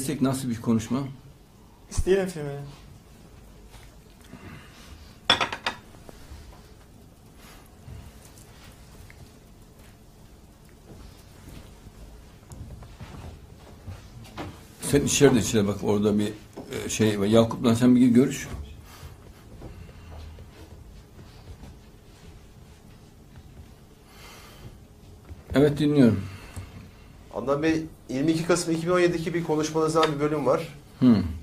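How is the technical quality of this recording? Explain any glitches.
The recording has one technical fault, a brief dropout near the middle.

Gap between stream segments, at 16.56 s: two consecutive segments, which fits a 6-second segment length, have time stamps that leave a hole of about 3.5 ms. The player fills it with silence, so the sound cuts out abruptly with hard edges. No audio is lost.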